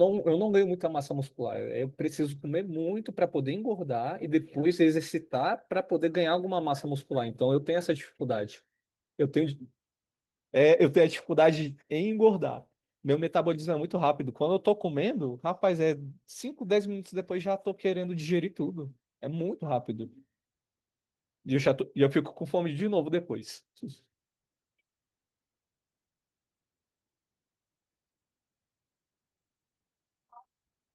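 No technical faults can be heard in the speech; the only trace of processing is the light coding texture of Opus voice compression, which sounds like its hybrid mode with the full band kept and fits a bitrate of around 24 kbps.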